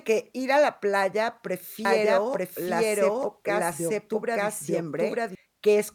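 Speech with a doubled audio track from 1.85 to 5.35 s, after "ir a la playa": an equally loud copy trails by about a second, starting and stopping abruptly with no decay, unlike echo. Likely from a second, slower capture path.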